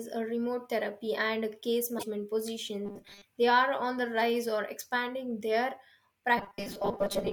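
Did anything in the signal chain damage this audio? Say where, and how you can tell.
Yes. At the codec or storage stage, the compressed stream holds damaged data. Just after "therapy and a case", from 1.95 to 2.03 s, the decoder loses frame sync and searches for the next header. That leaves a brief garbled blip in place of the speech.

Robotic sound from repeated short buffers, likely from a starved driver or buffer, repeats the last 5 ms to fill gaps, forcing a rigid 200 Hz buzz. It runs from 2.85 to 3.24 s, mostly repeats, and from 6.38 s, after "rise or expanding their", to the end, about half repeats.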